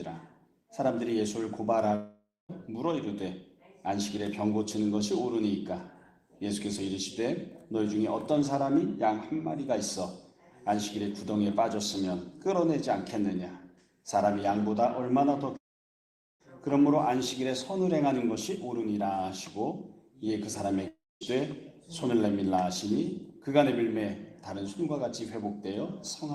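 At 1.95 to 2.51 s, 15.57 to 16.42 s and 20.88 to 21.36 s, the sound smears into a fading buzz, falls silent, then picks up again with about 0.54, 0.84 and 0.34 s missing. This is likely a long network dropout: the receiver stretched the last audio it had until it ran out.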